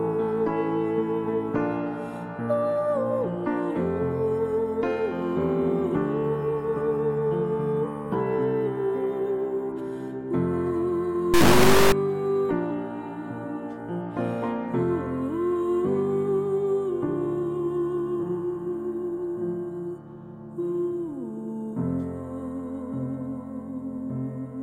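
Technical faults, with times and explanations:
11.34–11.92 s, integer read as float: the sample bits fit 32-bit integers read as 32-bit floats, so values jump between near-zero and far beyond range, producing an extremely loud, buzzing square wave.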